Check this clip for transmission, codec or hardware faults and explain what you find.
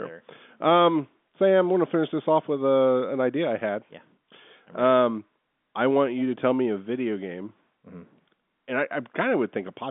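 Nothing stood out on listening; the speech comes through with the narrow 200 Hz to 3.5 kHz band of ordinary G.711 telephone coding.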